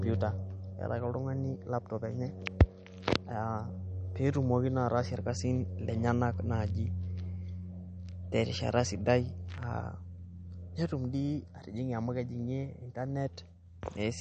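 Throughout the speech, the treble stops dead at 8.6 kHz, and the sound takes on a watery, swirling quality, with s sounds turning metallic and chirpy and consonant attacks smearing. The likely cause is MP3 compression at a low bitrate, which fits roughly 40 kbps. On a spectrogram this shows as a flat ceiling at 8.6 kHz with empty space above, and below it, holes that flicker on and off from frame to frame where weak components were zeroed.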